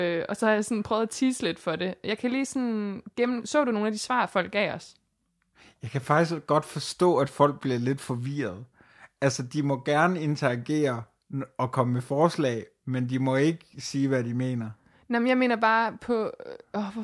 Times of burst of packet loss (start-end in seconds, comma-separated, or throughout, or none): none